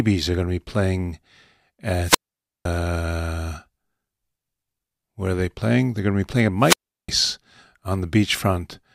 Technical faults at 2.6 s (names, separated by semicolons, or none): wireless microphone squelch dropout